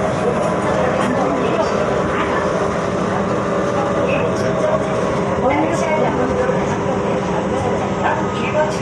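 Listening to this recording of sounds, nothing technical stood out as wrong.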